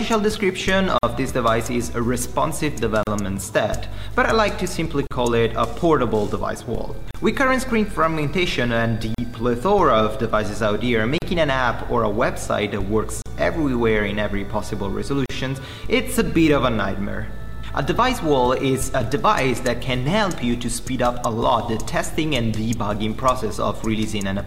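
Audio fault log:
0.98 to 15.30 s, gap at a join of encoded pieces at 0.98, 3.03, 5.07, 7.11, 9.15, 11.18, 13.22 and 15.26 s: separately encoded pieces joined untrimmed leave encoder delay and end padding, opening 50 ms then 38 ms smeared-edge silences every 2 s.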